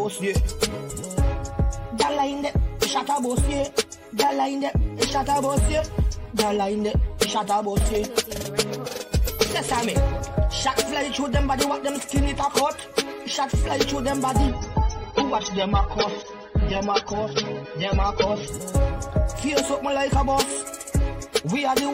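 From 14.48 to 18.48 s the adaptive stream switches to a lower bitrate: everything above 6.3 kHz vanishes and codec artefacts rise, with no gap.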